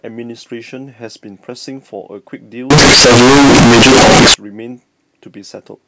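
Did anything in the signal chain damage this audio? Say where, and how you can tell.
Yes. From 2.70 to 4.34 s the speech turns into a loud, harsh, near-square waveform at an almost fixed, high level, with background noise as loud as the talker. This is float read as integer at the sample-format conversion stage, likely 32-bit float samples interpreted as 32-bit integers.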